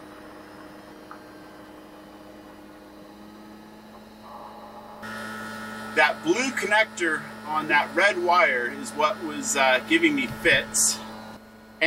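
From 0.57 s to 11.73 s, a click recurs every 0.93 s, around fifteen in all. These are likely clock drift buffer slips. Two clocks disagree by roughly 200 ppm. The buffer drifts, then drops or repeats a handful of samples.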